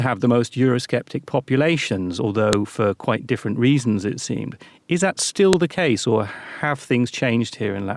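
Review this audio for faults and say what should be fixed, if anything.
Sharp clicks at 2.53 s, before "for quite different reasons", and 5.53 s, before "the case or have": a file header played as audio. The speech arrives in 3-second pieces, and each piece's header bytes play as samples. Strip headers before joining or streaming the pieces.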